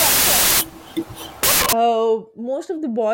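A speech clip with a wrong sample width fault from the start to 1.73 s. Loud, harsh noise dominates, with the talker buried faintly underneath. That buried speech runs 1.5 times too fast, so its pitch is raised. The sound fits 16-bit samples being read back as packed 24-bit ones. Each value then takes bytes from neighbouring samples. Only some values keep the real signal's top bits.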